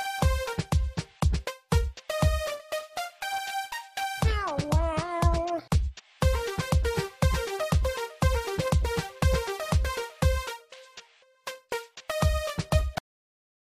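The audio has a cut-off end at 12.98 s: the sound stops mid-event and the remaining 0.75 s is silence. The final buffers were never written or played out, so playback simply stopped partway through the sound. What separates this from a natural ending or a fade-out is the lack of any decay. There is no tail, reverberation or gradual drop in level, just an abrupt change from active sound to nothing.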